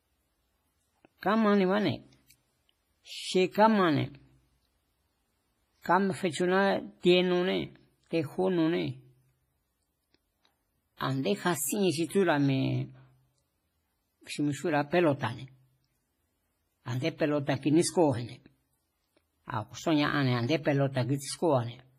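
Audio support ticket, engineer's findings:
Ringing, washy texture with hiss pumping along with the speech, nothing above 15.1 kHz, throughout. Likely WMA compression, heavy quantisation consistent with a low bitrate near 24 kbps.

Pre-echo at 10.97–11.00 s: hiss smeared about 37 ms ahead of a sharp attack. Transform block spreading quantisation noise before the transient, softening its onset.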